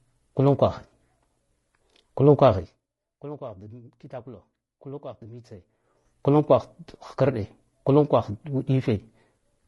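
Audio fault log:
throughout, low-delay AAC compression: the speech sounds rough and grainy throughout, with a hiss filling the gaps between the pitch harmonics and a top band that comes across dull and somewhat synthetic. The damage is plainly audible. This is likely AAC-ELD, the low-delay AAC used in video calls, at about 32 kbps. Its very short frames cannot separate closely spaced harmonics well and take more bits to code, so a modest bitrate leaves noise where the harmonic detail should be.
0.88 to 0.92 s, AAC frame loss with concealment: a brief smeared, noisy patch lasting about 40 ms, where the sound loses its definition and turns phasey for a moment before clean decoding resumes. The gap fits two lost frames. The decoder covered it by reusing the last good spectrum with scrambled signs or interpolated energy. That keeps the overall level and tone but not the real detail, so the patch comes out as a wash rather than a dropout.
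2.56 to 2.90 s, zipper noise: a fast ticking, zipping texture riding on the speech while the level drops by roughly 20 dB. The drop happens in coarse steps of 3 dB, about twenty per second, with no smoothing between them. Each sudden jump in gain puts a small discontinuity into the waveform, heard as a click, and the closely spaced clicks merge into the zipper sound.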